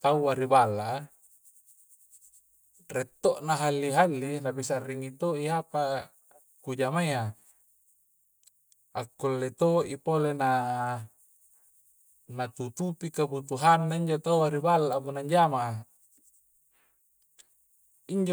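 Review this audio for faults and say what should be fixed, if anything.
No faults turn up anywhere in the recording. Nothing needs to be fixed.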